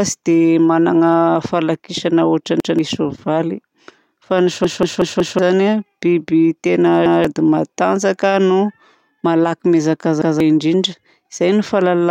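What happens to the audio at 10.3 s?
A repeated buffer runs from 10.22 to 10.40 s: new audio arrived late, so the last 186 ms block, which fits an 8192-sample buffer, played a second time. The speech audibly stutters, with a hard join at the repeat, and roughly a fifth of a second goes missing.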